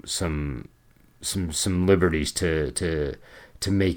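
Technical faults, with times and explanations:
No technical faults can be heard in this clip.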